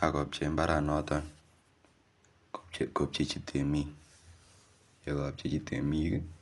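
Right from the start and all the way through, the speech sounds dull and lidded, with nothing above about 11.4 kHz, and there's a rough, fluttery grit clinging to the voiced parts. That's plainly audible codec damage, most likely Dolby Digital compression at a starved bitrate, which fits a 64 kbps stream. The encoder has chopped off the top band and left many frequency lines with no real data, so the decoder fills those gaps with noise.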